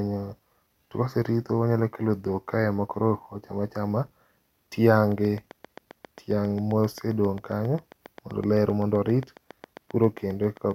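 It's a speech recording, and from about 5.12 s right through to 10.72 s there's a train of clicks ticking away over it, roughly 40 of them at a steady 7.5 per second. They all sound much the same and peak at about the level of the speech itself, so you hear them clearly in the pauses too. That steady, identical pulse most likely comes from interference from nearby equipment or a faulty connection or power supply.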